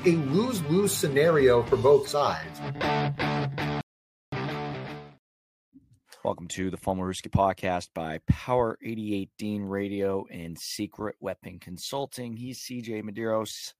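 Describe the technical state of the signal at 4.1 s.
At 4.1 s the signal is in a rebuffering stall. The sound cuts to silence at 3.81 s and stays silent until 4.33 s. The player had run out of downloaded audio and stopped. It waited for more data to arrive. Playback then picks up exactly where it broke off, so no audio is lost. The gap simply inserts about 513 ms of extra time. That makes the break sound like a sudden freeze, not a skip.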